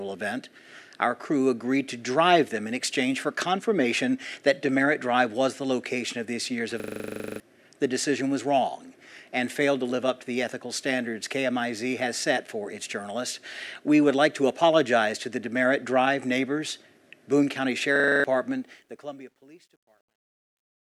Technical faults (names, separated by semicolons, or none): system hang loop; truncation distortion on a fade